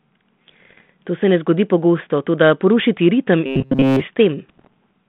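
From 0.51 to 0.90 s there are bit errors on the ADPCM link, with a scattering of flipped bits somewhere around half a percent. Each error throws the decoder's step size and predictor off, so you hear pops and rough, level-jumping bursts that ring on briefly. Right after "toda poruši ti ritem", from 3.46 to 4.01 s, the speech becomes robotic from repeated short buffers. Nearly all of it is a loop of the last fragment, giving a rigid 134 Hz metallic buzz. That likely means a buffer of about 7.5 ms being replayed while fresh audio didn't arrive. The bit errors return from 4.49 to 4.73 s, at a slightly higher rate, with the same pops and grainy bursts riding on the narrow 150 Hz to 3.5 kHz band of the 32 kbit/s G.726 line.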